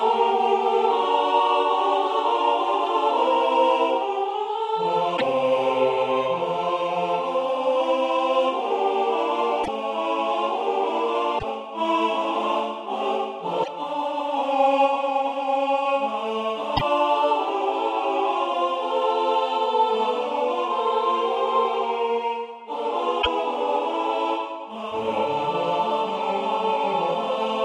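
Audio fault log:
5.16–5.22 s, 9.63–9.68 s, 11.38–11.44 s, 13.62–13.68 s, 16.76–16.82 s, 23.21–23.27 s: broken MP3 bit reservoir. Each time the sound skips forward and a garbled chirp, noise burst or short hole of roughly 55 ms takes its place, about two 26.1 ms frames long. The likely cause is frames dropped from the stream: the frames that follow reach back into the reservoir for data that is gone and decode unrelated bytes instead.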